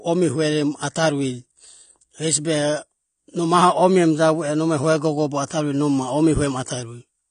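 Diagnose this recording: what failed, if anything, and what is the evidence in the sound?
AAC compression runs through the whole speech clip, at the codec stage. Nothing survives above 9.6 kHz, and the damage is plainly audible as dull, smeared sibilants with a warbling, fizzy edge. The likely cause is AAC-LC quantising its spectrum coarsely, consistent with roughly 32 kbps.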